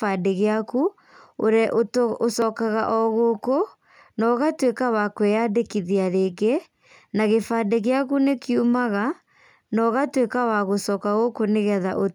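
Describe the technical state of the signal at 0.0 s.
At 0.0 s the signal is intact, with no dropout, distortion or other fault present at that moment.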